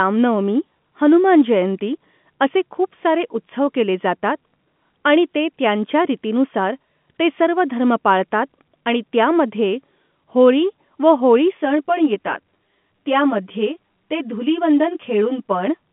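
From 11.57 s to 15.67 s the speech turns hollow and phasey, with a fixed colouring across the narrow telephone band. This is channel delay (comb filtering): one channel lags by around 10 ms, so the mono sum cancels evenly spaced frequencies, starting near 50 Hz.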